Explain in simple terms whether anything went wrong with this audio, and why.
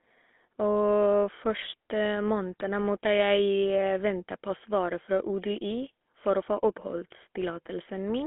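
Something did go wrong, and it lasts the whole clip. The speech went through the GSM full-rate codec, the squeeze used by early mobile phones. It rebuilds the voice from a rough model of the throat and mouth, driven by a simplified stream of pulses. That is why the speech sounds buzzy and gravelly from start to finish. The sound also stops at about 3.5 kHz at the top and 250 Hz at the bottom. So it sounds thin and phone-like.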